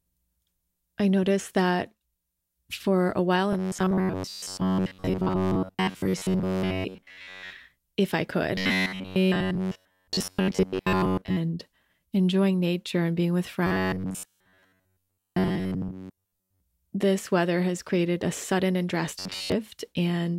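Right after "for a while", robotic sound from repeated short buffers kicks in from 3.53 to 7.53 s, then again at 8.55 to 11.38 s, 13.67 to 16.60 s and 19.19 to 19.52 s. It's a rigid metallic 93.8 Hz buzz, likely a roughly 10.7 ms buffer replayed while most real audio gets skipped.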